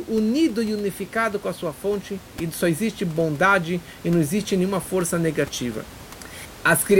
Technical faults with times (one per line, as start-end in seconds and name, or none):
none